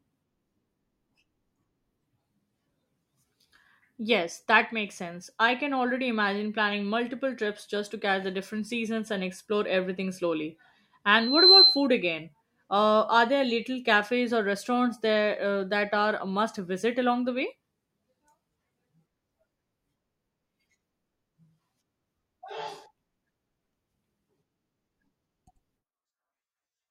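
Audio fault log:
11.16–11.88 s, loudspeaker feedback squeal: right after "and explore everything slowly", a single tone at 4.1 kHz rises out of the speech, swelling over roughly a third of a second until it stands about 10 dB above the voice, then cuts off. The microphone is hearing the loudspeaker it drives, and at 4.1 kHz the round trip gains more than it loses, so that one frequency feeds itself into a piercing whistle until the loop is broken.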